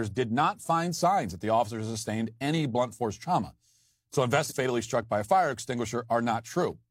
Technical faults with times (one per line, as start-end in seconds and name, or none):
4.46-4.52 stream segment skipped